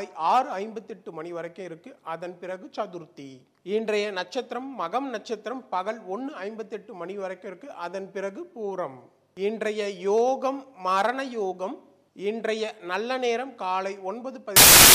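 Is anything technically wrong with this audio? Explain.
Yes. Samples built from the wrong bytes, from 14.56 s to the end at 14.95 s: misassembled sample bytes push the rapidly changing low bits into the top of each value, producing loud, harsh broadband noise.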